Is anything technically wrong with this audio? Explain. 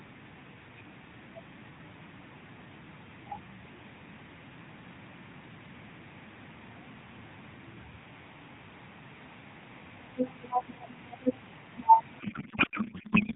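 Yes. Starting at 12.20 s and running to the end of the clip at 13.35 s, there is a codec payload misread. The speech comes through the AMR narrowband mobile codec, band-limited below 4 kHz with light coding grain consistent with the 12.2 kbps mode. In the final stretch, the receiver unpacks octet-aligned AMR frames as though they were bandwidth-efficient. Every field lands in the wrong bit position, so the decoder builds the sound from misplaced parameters. The speech turns into garbled noise and warble that barely tracks it.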